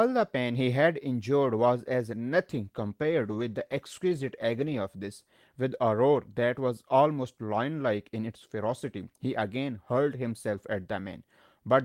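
From 2.55 to 4.89 s, speech sounds rough and muffled: a call bitrate drop, the encoder coding coarsely, which fits roughly 18 kbps.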